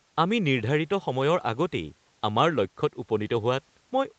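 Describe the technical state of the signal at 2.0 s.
At 2.0 s the speech is intact, with no fault present, only the ordinary band limit near 8 kHz left by the call microphone processing and the Opus call path.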